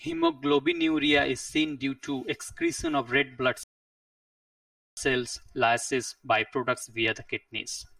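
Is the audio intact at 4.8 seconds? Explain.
No. At 4.8 seconds the sound is inside a rebuffering stall running from 3.63 to 4.97 seconds. Playback ran dry and went silent for about 1.34 s, then resumed exactly where it stopped. Channel delay (comb filtering) also runs throughout. One channel lags by roughly 3 ms, and summing to mono cuts notches from around 150 Hz upward, leaving the speech hollow.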